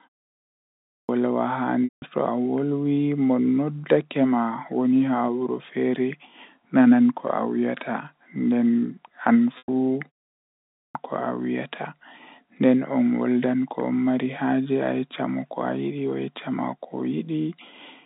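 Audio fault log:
0.51–1.09 s and 10.36–10.95 s: clipped start after a pause. The output device had gone idle during the silence, 0.51 s and 0.33 s long, and needed time to wake, so roughly 0.58 s and 0.59 s of speech are lost and each phrase bursts in abruptly, already under way.
1.84–2.02 s and 9.58–9.68 s: packet loss with pitch repetition. Runs of lost packets, 180 ms and 100 ms, were bridged by repeating the last pitch period and fading it out, giving a brief held, buzzy tone that dies away before the speech cross-fades back.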